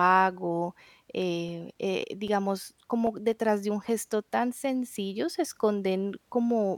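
From 1.22 s to 3.33 s the speech carries CD scratch ticks: nine short clicks at a steady rate of roughly four per second, ending just before "de un gesto tan". The longest lasts about 7 ms. A blemish on the disc passes the laser once per revolution and corrupts more data than error correction can rebuild, so the player interpolates or mutes those samples. The result is a regular train of ticks and tiny gaps of uneven strength.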